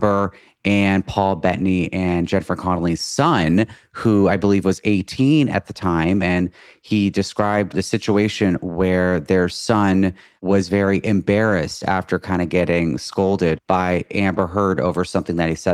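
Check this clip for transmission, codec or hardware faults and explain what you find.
Nothing in the recording stood out as a problem on listening.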